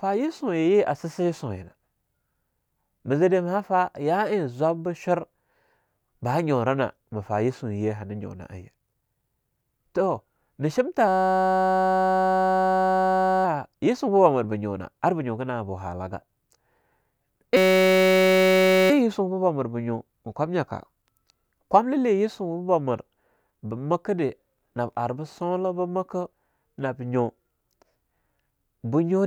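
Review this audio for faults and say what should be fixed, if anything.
Two system hang loops, 11.08 to 13.45 s right after "toh nah", and 17.57 to 18.90 s just before "yisuba mir ba". The speech freezes into a steady 188 Hz buzz as one 5.33 ms chunk replays while the system stalls, which fits a 256-sample buffer. Fix the stall, and have the driver mute output whenever the buffer stops being refilled.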